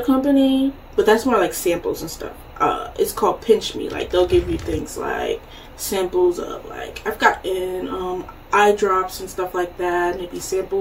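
No technical faults can be heard anywhere in this audio. There is nothing to place on the timeline.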